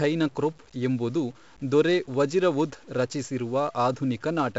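Throughout the speech, the signal was most likely cut to a few bits by plain truncation with no dither. The rounding error therefore tracks the signal, leaving grainy, level-dependent grit roughly 35 dB below it, which fits 8-bit truncation, and quiet passages sound rough rather than hissy.

Also throughout, the audio passed through heavy 4-bit ADPCM compression, encoding each sample as a small adaptive step from a prediction, which points to about 64 kbps. The result is gritty hiss riding on every loud syllable, roughened attacks, and nothing above 7.7 kHz, so the sound is dull.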